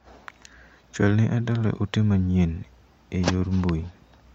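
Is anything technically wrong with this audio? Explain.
No, nothing technically wrong can be heard in this speech recording.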